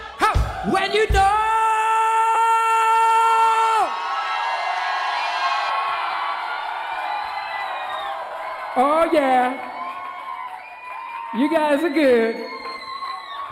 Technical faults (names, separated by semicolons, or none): lost LE Audio frames; channel delay (comb filtering)